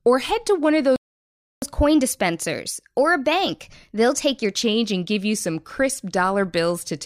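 At 0.96 s, just after "head to one of", the player was likely starved of data or had its output thread blocked, causing a playback stall: the speech cuts off in mid-flow and the output stays silent for about 0.66 s, until 1.62 s, before resuming.

From 1.62 s to 4.62 s comes catch-up at higher speed, as the player resamples its backlog to recover the lost time. The speech runs 1.1 times faster and sits about a semitone and a half higher, returning to normal speed and pitch by "and give you some".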